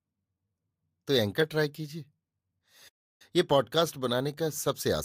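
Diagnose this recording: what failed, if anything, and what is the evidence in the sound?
A playback stall interrupts the speech at 2.88 s, leaving about 0.32 s of silence before the sound resumes at 3.22 s. The waveform drops to a flat line and the spectrogram shows a blank vertical band. The likely cause is the player running out of buffered data or its thread being blocked.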